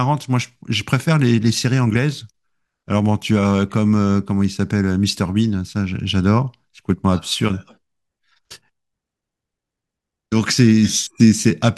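No technical faults are audible anywhere in this recording.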